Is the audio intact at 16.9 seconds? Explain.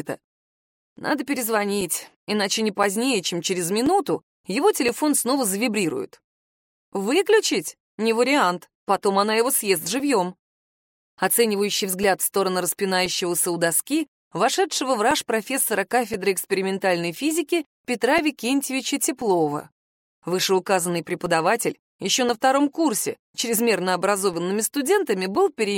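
No. From 0.78 to 25.35 s, periodic USB or driver dropouts occur every 1.024 s. Each one blanks a few milliseconds to silence, giving steady ticks through the sound.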